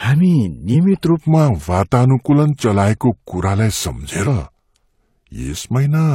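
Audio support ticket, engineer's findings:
Section at the wrong speed, 1.20 s to end. Speech drops to 0.84x, slower and about three semitones deeper. Likely a clock or rate mismatch in the player or edit.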